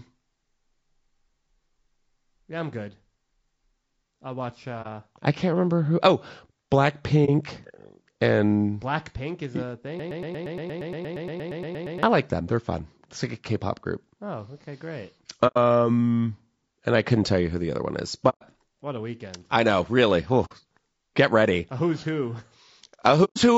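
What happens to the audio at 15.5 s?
AAC frame loss with muting occurs from 15.47 to 15.57 s. The decoder zeroed the missing spectrum, and its overlapping windows fade the speech down and back up, leaving a soft-edged hole about 0.1 s long. The gap fits a few consecutive lost frames.

Across that moment, as through the rest of the clip, the speech sounds rough and grainy, with noise filling between the harmonics and an artificial-sounding top band. That points to likely low-delay AAC compression (AAC-ELD), whose short frames resolve pitch poorly, at a low bitrate around 32 kbps.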